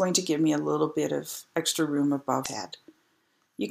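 At 2.42 s, lasting about 44 ms to 2.46 s, a short burst of damaged data in a compressed stream breaks through as a brief disturbance. Some bytes in the encoded stream were corrupted there, so the decoder misread the affected frames, lost its place and had to hunt for the next valid frame header before normal decoding resumed.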